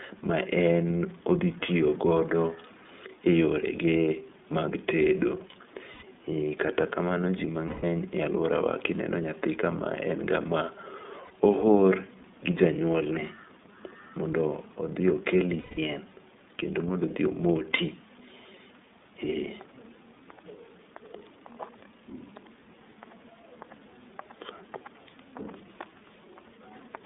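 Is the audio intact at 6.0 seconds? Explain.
No. From 5.94 to 6.03 s there are lost iLBC frames. The decoder filled a gap of about 90 ms, consistent with three missing 30 ms frames, by repeating the last pitch cycle blended with noise. It sounds like a brief held, buzzy vowel. On a spectrogram it shows as flat, smeared harmonics, and the waveform shows a repeating periodic pattern before normal speech resumes almost immediately.

This moment also sits within iLBC codec damage that runs through the whole clip. The audio is confined to roughly 150 Hz to 3.6 kHz, and the codec runs in iLBC's 30 ms frame mode at 13.33 kbps. It sounds audibly rough and synthetic. A spectrogram shows a hard ceiling near 3.6 kHz with empty space above it.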